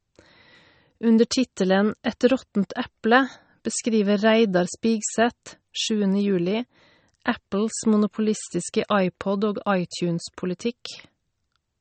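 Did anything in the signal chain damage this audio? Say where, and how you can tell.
Yes. The damage sits at the codec stage and runs through the whole speech clip. It is most likely MP3 compression, and the artefacts point to a low bitrate of around 35 kbps. Nothing is present above 8.4 kHz, and the codec damage is plainly audible throughout. Starved of bits, the encoder drops weak frequency lines frame by frame, so detail flickers in and out with a watery, swirling texture. The 8.4 kHz ceiling is its fixed treble cut. A plain low-pass filter or narrowband path would also remove the top but would not produce that frame-to-frame flicker.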